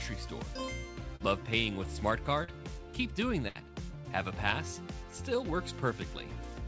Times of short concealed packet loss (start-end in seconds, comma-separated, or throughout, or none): 1.16-1.23, 2.44-2.51